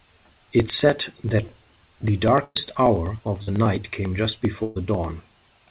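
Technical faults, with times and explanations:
0.10 to 5.70 s: periodic USB or driver dropouts. A small slice of audio is skipped about every 0.099 s, roughly ten times a second, as something blocks the audio path at a fixed interval. The result is a steady train of ticks, audible only where there is signal.
2.44 to 2.57 s and 4.63 to 4.77 s: burst of packet loss. Each time about 120 ms of audio never arrived. The receiver stretched the last sound into a fading buzz or hiss, and then the audio resumes further on. In the first gap the fill runs about 112 ms and fades into roughly 50 ms of silence. In the second it covers the full 120 ms with no silence.
3.43 to 3.49 s: short concealed packet loss. About 40 ms of the call reached the decoder too late. The receiver covered the hole with roughly 41 ms of continued sound before blending back into the real audio, heard as a brief smear or wobble. 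On this G.711 mu-law path nothing is carried above 4 kHz.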